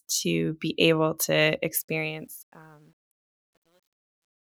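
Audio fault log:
1.77–4.42 s, truncation distortion on a fade: the fade-out, running from about 1.77 s to 4.43 s, is requantised without dither, at a resolution that fits roughly 11 bits. As the level drops, the speech turns gritty, and from 2.54 s the grit is at its worst.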